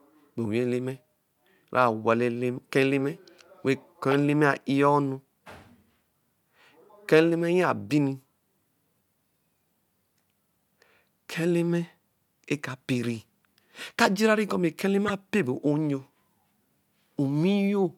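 Corrupt frames decoded in this speech clip: flipped bits in a few consecutive frames were played anyway, spraying misplaced energy peaking around -15 dBFS as brief glitches at 4.12–4.15 s and 15.08–15.10 s.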